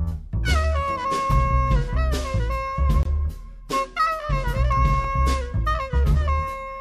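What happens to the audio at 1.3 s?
A block of digital silence hits at 1.32 s, lasting about 2.4 ms. For that instant the output samples drop straight to zero, most likely because the program failed to fill its output buffer in time. There's no fade on either side, so the waveform jumps abruptly to nothing and back again. Because the hole is so short, it doesn't register as a gap in the sound. It comes across as a brief tick or dip at 1.32 s.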